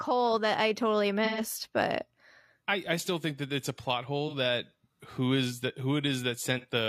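Speech clip with AAC frame loss with concealment. Dropouts occur at 1.25 to 1.41 s, 4.28 to 4.35 s and 6.59 to 6.65 s. The decoder patches each gap from the last good spectrum. This leaves smeared, noisy patches. The first, 128 ms long, suggests three lost frames.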